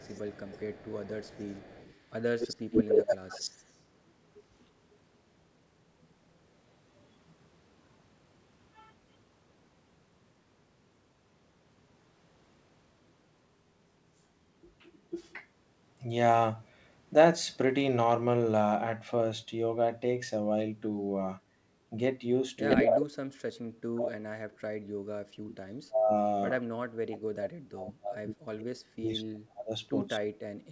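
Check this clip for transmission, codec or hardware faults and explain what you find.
Two kinds of fault are present, echo leak and speech suppressed in double talk, each occurring twice. The band stops at 8 kHz, which fits a wideband call codec such as G.722 and is not itself a fault.

Echo leak runs from 0.02 to 4.65 s and again from 22.69 to 23.02 s. A delayed copy of the talker rides under the direct sound, about 139 ms late in the first stretch and about 161 ms late in the second. The first copy sits about 5 dB below the speech. The second is roughly as loud as the speech. This is likely a far end on loudspeaker whose echo canceller left part of the microphone pickup in place and sent it back down the line.

Speech suppressed in double talk appears as a brief dip of about 10 dB from 0.00 to 0.05 s. A much heavier episode runs from 22.82 to 30.25 s, where the level falls by as much as about 40 dB, in pieces totalling around 5 s. 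The likely cause is an echo canceller that could not tell the local talker from loudspeaker echo while both sides were active, so it attenuated everything, including the wanted speech.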